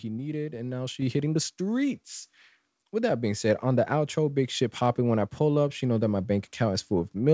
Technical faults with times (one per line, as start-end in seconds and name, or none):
1.02 microphone volume stepped up